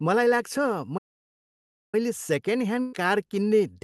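At 0.97 s the speech just cuts out and the output sits silent for about 950 ms, picking up again at 1.95 s. That's a playback stall: the player stopped feeding audio to the output for nearly a second. The likely cause is that it ran dry of buffered data or its playback thread got held up, and the sound simply waits until it recovers rather than glitching or repeating.

Later, from 2.81 s to 3.08 s, there's a burst of packet loss. Around 120 ms of audio never arrived in time, and the receiver papered over it by stretching out the last bit of sound for about 120 ms and fading it down, so you hear a smeared, held tail instead of a gap. When the stream picks back up, that missing stretch of speech is gone, so the flow jumps ahead a little.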